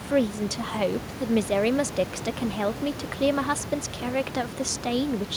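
No technical faults are audible in this recording.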